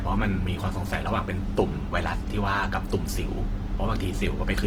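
Across the whole speech clip, Opus compression in its music mode, at a low rate that fits about 16 kbps, is the likely cause of plainly audible damage. Starved bands get filled with folded or noise content, so tones turn rough, grainy and noisy, while content still reaches 20.2 kHz.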